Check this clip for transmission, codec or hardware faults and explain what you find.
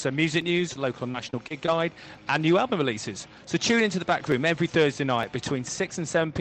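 Two faults show up: a run of packet loss early on and four isolated clicks spread through the clip.

Repeated packet loss (robotic sound), from 0.59 to 1.68 s: incoming audio went missing several times in quick succession. The longest hole was 27 ms, and about 110 ms was lost in total. Each hole was bridged by extending the preceding sound, with roughly 50 ms rebuilt this way. Because the patches come so close together, this stretch sounds choppy, with small pieces missing. The audio also carries the coding texture of an Opus call path with content reaching about 8 kHz, which fits a bitrate around 32 kbps.

Dropped samples at 0.42, 3.06, 4.32 and 5.23 s: at each point the waveform jumps straight from one value to a later one, likely because a fraction of a millisecond of samples was skipped. So little is lost that no sound goes missing. What you hear instead is a single sharp tick each time, which shows on a spectrogram as a thin vertical line across the frequency range.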